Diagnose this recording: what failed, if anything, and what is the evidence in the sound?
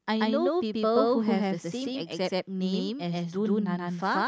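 What's broken is a channel delay (doubling), and it sits at the driver or buffer stage. All through the speech you hear every syllable twice, with a distinct slap about 128 ms behind at the same level. That gap fits one channel landing a 2048-sample buffer late at 16 kHz. Once the two channels get summed to mono, the late copy doesn't blend in and stands out as its own echo.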